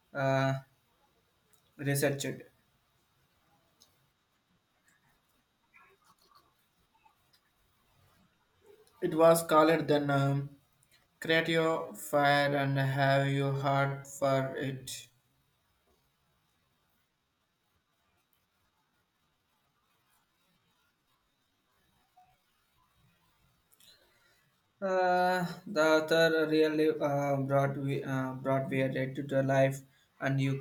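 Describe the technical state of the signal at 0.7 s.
At 0.7 s the speech signal is intact, with no audible technical fault at that point.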